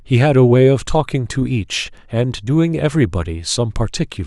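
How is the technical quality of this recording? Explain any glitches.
No glitches, dropouts or other technical faults can be heard anywhere in this recording.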